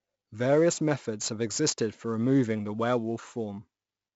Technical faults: 4-bit ADPCM compression

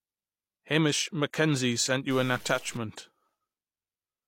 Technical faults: stuck bit

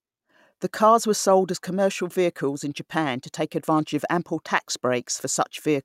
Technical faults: none

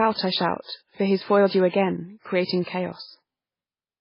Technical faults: MP3 compression

